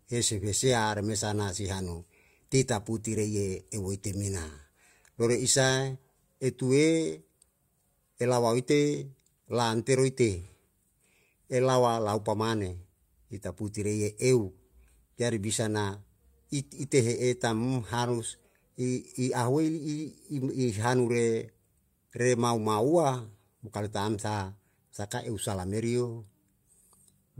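No technical faults can be heard at any point in the recording.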